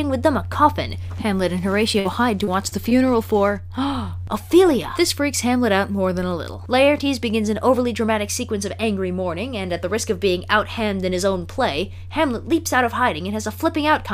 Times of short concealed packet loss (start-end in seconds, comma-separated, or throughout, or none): 2.45-2.93